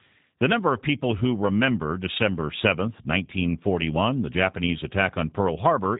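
From start to finish the speech carries G.729 codec damage, plainly audible as a rough, slightly synthetic buzz from rebuilding each frame with a few pulses, which fits an 8 kbit/s stream. On a spectrogram, energy stops flat at 3.8 kHz.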